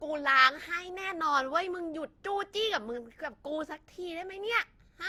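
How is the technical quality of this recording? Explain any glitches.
The recording is degraded by generation loss across the whole clip. Throughout, the speech sounds swirly, smeared and hollow, with blurred consonant attacks. This likely comes from around seven successive lossy passes, consistent with Opus near 64 kbit/s, each pass re-quantising on a shifted frame grid and compounding noise.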